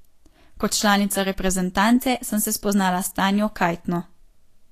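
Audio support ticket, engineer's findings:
Hissy, grainy treble and roughened tone throughout; nothing above 14.2 kHz. Likely Vorbis compression near 37 kbps, coarse treble quantisation turning fine detail into noise.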